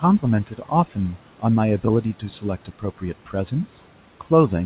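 Short speech clip with two spots of speech cut by the noise suppressor, from 0.47 to 0.71 s and from 2.65 to 3.03 s. The suppressor mistook bits of speech for the background and pulled them down by about 11 dB, so those stretches sound swallowed. The room noise sits about 21 dB under the speech, and nothing comes through above 4 kHz, which fits a G.711 call path.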